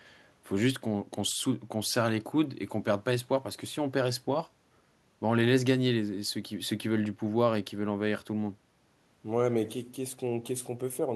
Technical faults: none

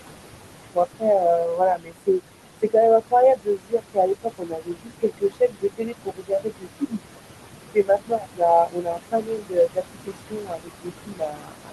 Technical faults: noise suppressor artifacts; speech cut by the noise suppressor

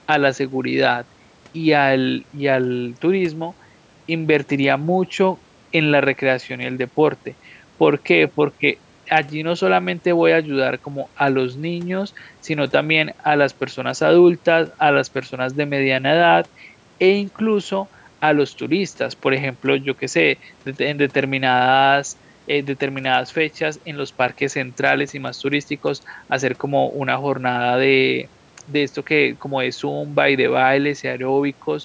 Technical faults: none

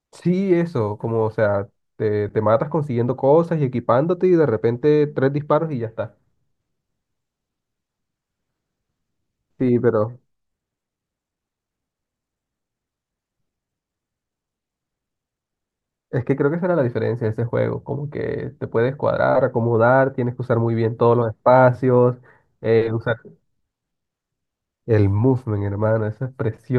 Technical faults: none

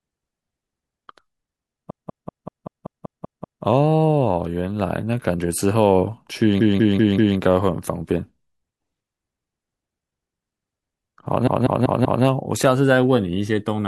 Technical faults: repeated frames

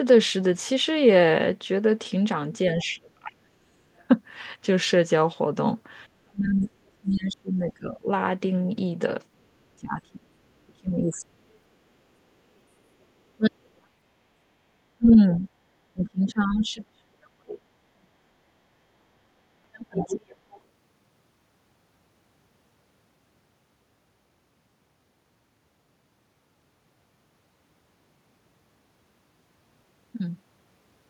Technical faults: other side's voice leaking through; speech suppressed in double talk

